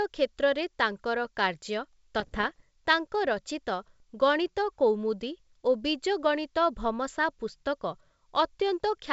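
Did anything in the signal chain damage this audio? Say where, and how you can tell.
Yes, at the transmission link. From 2.19 to 2.61 s the speech breaks into pops and rough, gritty bursts with brief level jumps. These are bit errors on an ADPCM link, at a rate of a fraction of a percent. Each flipped bit corrupts the decoder's step size and predictor, so the disturbance rings on briefly rather than clicking once.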